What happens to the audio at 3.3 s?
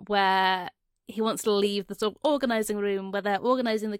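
Nothing goes wrong at 3.3 s; the speech continues intact through that moment with no audible fault.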